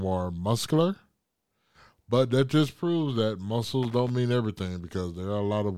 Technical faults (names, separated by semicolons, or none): loose connector crackle